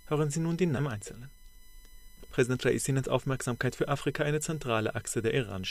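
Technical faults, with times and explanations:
Throughout: USB whine, a fixed-pitch tone built on 1 kHz with its strongest component up at 13 kHz, sitting about 30 dB below the sound. Current drawn by the USB bus in 1 ms frames leaks into the audio through power or ground, producing this steady whine and its harmonics.
0.77 to 0.79 s: skip ahead. Playback jumps forward with no gap, losing roughly 400 ms of audio, and the two sides are joined almost directly. Audio arriving ahead of need was discarded, likely by an overflowing jitter buffer, cutting the delay abruptly.
0.95 to 3.68 s: jitter buffer speed-up. The sound runs at 106 percent speed with unchanged pitch and feels slightly hurried. The buffer held more audio than its target, so the receiver trimmed many short pitch-period pieces, removing about 150 ms in total.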